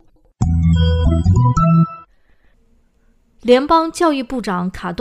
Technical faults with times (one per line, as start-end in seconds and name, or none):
0.00-5.00 crude rate conversion